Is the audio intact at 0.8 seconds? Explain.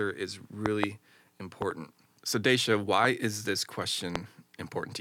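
No. A loud pop spans 0.66 to 0.86 s. A sudden voltage pulse, likely from a plug, switch, static or driver glitch, lands on the signal, giving two sharp pops about 20 dB above the speech, which continues underneath them.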